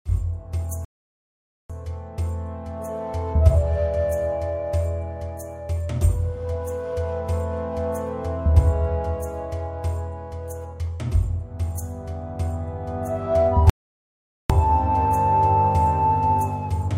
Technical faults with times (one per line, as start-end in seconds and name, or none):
0.85-1.70 rebuffering stall
13.70-14.50 rebuffering stall